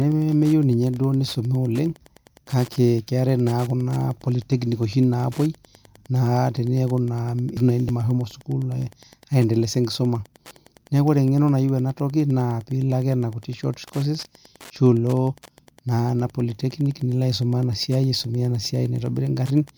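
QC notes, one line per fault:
Throughout, Wi-Fi interference: a nearby Wi-Fi radio's beacon, sent every 102.4 ms, is rectified by the audio circuit and leaks in as a steady ticking close to ten times a second. It sits roughly 30 dB beneath the speech, faint but constant.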